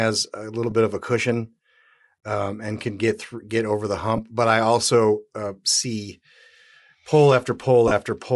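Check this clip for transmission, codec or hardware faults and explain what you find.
Two faults are present in this speech clip.

Throughout, the upper band sounds grainy and breathy, consistent with likely Bluetooth LC3 compression at a rate that fits about 48 kbps. On a spectrogram the highs appear speckled and noise-filled.

Lost LE Audio frames occur at 0.70 s (between "a little" and "bit of a cushion"), at 4.17 to 4.19 s (after "get over the") and at 7.88 to 7.91 s. Each time, the decoder reused the last spectrum with random signs, producing a brief noisy smear that shows as short blurred patches on both the spectrogram and the waveform.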